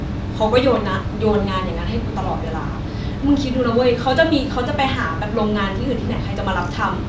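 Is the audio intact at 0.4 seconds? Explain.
Yes, the audio is intact at 0.4 seconds, with no audible fault at that point.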